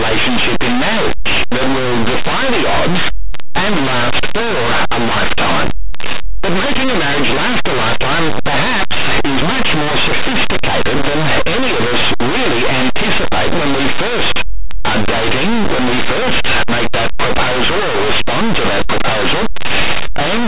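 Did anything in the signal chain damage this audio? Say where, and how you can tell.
Yes. Linear audio read as companded, throughout: linear 8-bit samples were decoded as mu-law at sample-format conversion, so values just on one side of zero become the largest outputs while those on the other side stay small, giving harsh, constant distortion.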